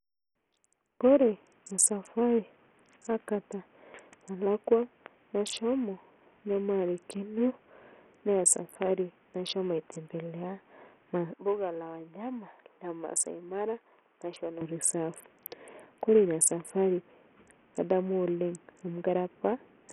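From the start and through the whole speech clip, the sound carries heavy damage of the kind Bluetooth SBC compression leaves, most likely from an SBC link running at a low rate, consistent with roughly 48 kbps. With so few bits shared across its wide sub-bands, the upper bands are starved and the rest quantised coarsely, so the treble thins and flickers and a gritty, metallic grain rides on every syllable. A spectrogram shows the top region breaking into patchy, blocky fragments that switch on and off.

At 11.34 s the input switched to a poorer device, likely a different microphone or a headset in call mode, and the change lasts until 14.61 s with no gap at either switch. Over that stretch the speech turns duller and boxier, drops a few decibels in level, and gains a faint new background noise sitting far below the speech. On a spectrogram nothing appears above 10 kHz, a flat ceiling that starts and ends abruptly at both times, while the waveform's envelope steps down slightly for the same span.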